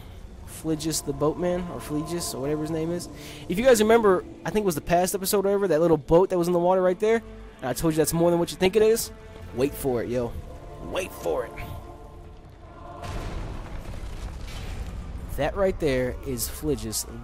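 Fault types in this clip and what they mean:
DAB burbling: Under weak reception, bit errors slipped past the receiver's error correction into the MP2 audio data, corrupting samples and scale factors so single sub-bands leapt in level for up to a frame. The result is short noise blips over the sound: a tiny blip at 5.93 s, a longer patch from 8.61 to 8.83 s, and a short burst from 16.56 to 16.66 s. This fits an error rate well under one percent.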